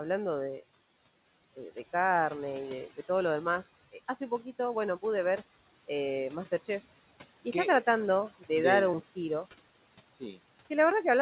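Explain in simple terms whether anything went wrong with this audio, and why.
A noise suppressor was working on this speech recording the whole time, trying to remove the background noise of the room. Between phrases it pushes that background down hard, and it lets it back up under the speech. These are noise suppressor artifacts.

At 6.96 s, just before "y está tratando", there is a tiny skip. This is audio missing between chunks, likely caused by the recorder handing off between the pieces of about two seconds it processes. A sliver of a fraction of a second drops out, and the sound jumps.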